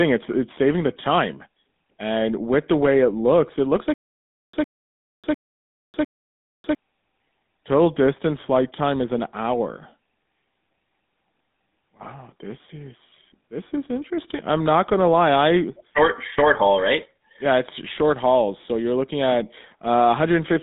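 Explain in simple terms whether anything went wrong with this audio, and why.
Stutter with silent gaps, from 3.94 to 6.75 s: the same brief 107 ms snatch of speech plays four times, each followed by about 0.6 s of dead silence. The likely cause is the player or stream stalling and replaying its last fragment, so the speech meant for that stretch is lost.

GSM full-rate codec, throughout: the speech has a buzzy, gravelly roughness, and nothing above about 3.8 kHz comes through, so it sounds thin and phone-like. This old mobile-phone codec rebuilds the voice from a simplified model instead of keeping the real waveform.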